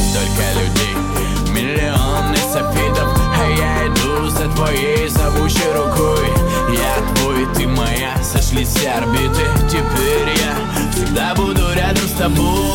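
No technical faults can be heard anywhere in the audio.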